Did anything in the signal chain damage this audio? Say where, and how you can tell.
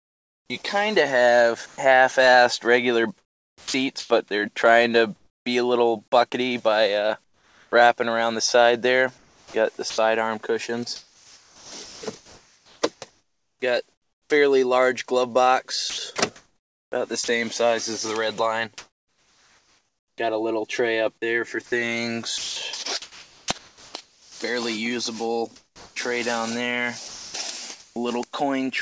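Yes, at the call-processing stage. From 0.0 to 27.96 s, sound chopped by the voice detector likely explains the choppiness: about 9.4 s becomes comfort noise.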